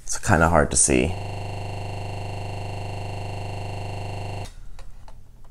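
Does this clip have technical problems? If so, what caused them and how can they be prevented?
Yes, there's a system hang loop from 1.17 s to 4.45 s. The machine or its audio driver froze, but the sound hardware kept replaying whatever was left in its ring buffer. You hear one 40 ms slice of audio repeated exactly, roughly 80 times, so the sound turns into a gritty rattle at 25 Hz. That's fast enough to feel like a buzz but still has a bit of stutter in it. To prevent it, find and fix whatever stalls the audio thread (driver bugs, CPU or disk starvation), and have the playback or capture path output silence when the buffer stops being refilled.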